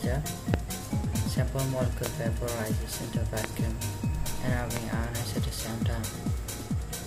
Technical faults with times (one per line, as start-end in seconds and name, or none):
0.54-0.56 loud pop
2.06-2.08 loud pop
3.44-3.46 loud pop
4.77-4.79 loud pop